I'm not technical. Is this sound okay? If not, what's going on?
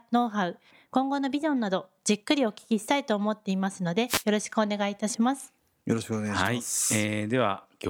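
No. At 4.07 to 4.24 s, and again briefly at 6.44 to 6.49 s, a short burst of hissy static cuts across the speech. This is a wireless microphone noise hit: the radio link from the microphone momentarily weakened, letting the receiver's own noise break through.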